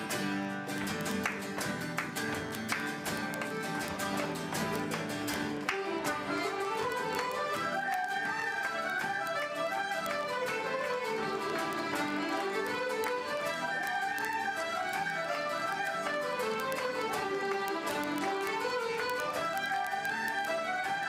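Word clock ticks run from 0.12 s to 21.07 s: a steady train of clicks about every 20 ms. The receiving device's clock is not locked to the sender's and drifts by roughly a thousandth, so at each slip one sample is dropped or repeated.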